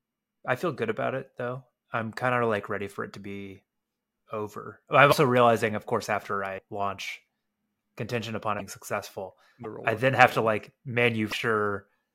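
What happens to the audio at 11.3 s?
At 11.30 s the speech breaks for about 30 ms, up to 11.33 s. The sound jumps ahead at that point, and the span lasting roughly one 26 ms frame comes out as a chirp, a burst of noise or a short hole rather than clean speech. The likely cause is a broken MP3 bit reservoir. Frames in this format store part of their data in earlier frames. When frames go missing, the frame after the gap reaches back for its borrowed bytes and decodes bytes from a different frame instead.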